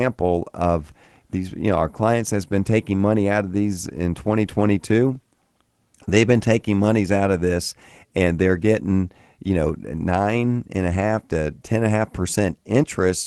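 Speech, with nothing technically wrong to be heard. It has come through a WebRTC call path whose top end stops at about 12 kHz, which fits an Opus codec running at around 24 kbps.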